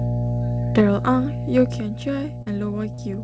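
A steady, heavy 60 Hz mains hum runs under this short speech recording from start to finish. It sits only a few decibels below the speech, so it is nearly as loud as the talker. Mains hum like this comes from the power line leaking into the signal, typically through a ground loop or a transformer near the cabling. Between 0.77 and 0.82 s the loudest peak turns harsh and crackly, with its tops flattened about 3 dB beyond the converter's limit and roughly a tenth of the samples in that stretch clipped. That is microphone overload, most likely from the input gain being set too high for that burst. Right at 0.81 s, as the clipped peak ends, the voice and the background behind it drop together by about 4 dB, and at 1.8 s a second sudden drop of about 5 dB follows. Both sound like the microphone volume stepped down, likely the call software's automatic gain control finding the microphone too loud or clipping and lowering the device input in single steps. 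Two brief smeared, wobbly patches occur at 2.42 to 2.48 s and 2.94 to 3.0 s, each replacing about 40 ms of audio. These are short concealed packet losses, where chunks of the call arrived too late and the receiver extended the preceding sound to cover the gap before blending back into the real signal. The whole recording is band-limited, with nothing above 8 kHz, which fits a G.722 wideband call path.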